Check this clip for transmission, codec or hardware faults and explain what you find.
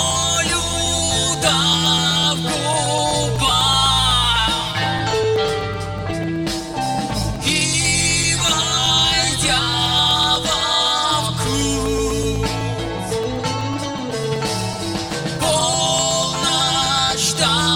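There's one fault here, running the whole way through: periodic USB or driver dropouts from 0.11 s to 17.61 s. Every 0.125 s, eight times a second, a couple of milliseconds of audio is blanked to silence, presumably while something stalls the bus or driver. You hear it as a steady ticking riding on the signal.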